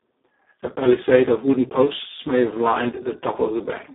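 Speech coded with the Speex codec throughout sounds hoarse, noisy and edging on robotic, which fits a very low setting near 4 kbps. A spectrogram shows the band held between 250 Hz and 3.6 kHz, nothing above 3.8 kHz, and smeared, grainy harmonics.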